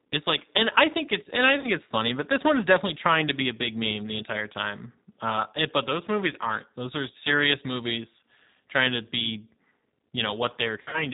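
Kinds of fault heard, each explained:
G.729 codec: The whole speech clip passes through an 8 kbit/s G.729 voice codec, which rebuilds each 10 ms frame from a vocal tract filter, a pitch predictor and a handful of pulses. The damage is plainly audible: nothing above 4 kHz survives, and the voice has a rough, slightly synthetic grain. That modelled roughness, rather than smeared, swirly high frequencies, separates it from a music-oriented lossy codec at low bitrate.
VoIP packet loss concealed by the speech codec: At 1.60 to 1.69 s about 40 ms of audio is missing, which fits two lost 20 ms packets. From 10.81 to 11.06 s about 100 ms is lost, scattered over 120 ms with a longest run of 60 ms. The decoder fills each gap by stretching its last pitch and filter into a fading buzzy tone or coloured noise, and the voice stays weak or distorted briefly afterwards. Unlike a plain dropout, there is no hard silence or click.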